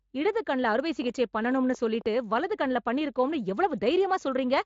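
A train of clicks runs from 1.02 to 2.07 s in this speech clip: around fifteen similar pops at an uneven pace of about 11.6 per second, peaking roughly as loud as the speech itself. A likely cause is interference or a faulty connection injecting repeated pulses. The speech carries light Speex coding, with nothing above 7.6 kHz, consistent with a bitrate near 24 kbps.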